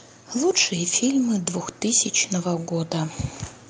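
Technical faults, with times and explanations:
0.68 to 2.98 s, automatic gain rising: speech and background swell together by about 3 dB over some two seconds, because the gain control judged the input too quiet and raised its level gradually. Through the call codec the top end stops near 12 kHz.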